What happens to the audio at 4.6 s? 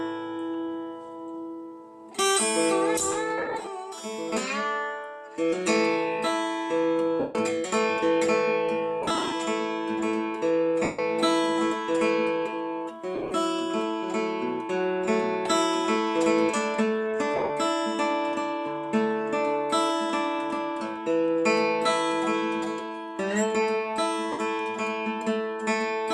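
Nothing goes wrong at 4.6 s; the audio there is intact, with only the light, even coding of the lossy compression that runs through the recording.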